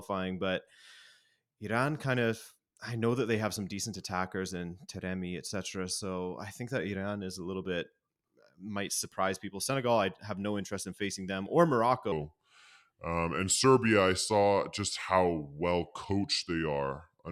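From 12.12 s to the end, right after "in facing them or", there is a section at the wrong speed. The speech runs at 0.825 times its recorded rate. Pitch falls about three semitones, so it sounds deep and dragging. A mismatched playback clock is the likely cause.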